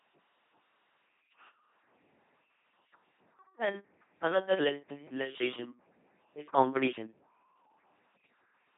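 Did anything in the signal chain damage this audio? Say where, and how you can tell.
Yes, at the codec: an LPC-10 vocoder throughout turns the speech into a buzzy, mechanical robot voice, consistent with a 2.4 kbit/s rate. Each frame is driven by either a pulse train or noise. A spectrogram shows rigid harmonic combs, noise patches, and nothing above 3.8 kHz.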